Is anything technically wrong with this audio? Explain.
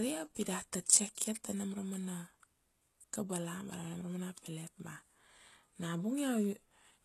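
Yes, there is one fault. Throughout the speech, plainly audible HE-AAC compression damage is present, likely from an HE-AAC encode at a very low bitrate, on the order of 16 kbps. The treble is rebuilt by copying lower bands upward, so s sounds turn gritty and lispy. On a spectrogram, energy stops sharply at 12.3 kHz, and the upper band shows repeated, blocky patterns whose harmonics do not line up with those below.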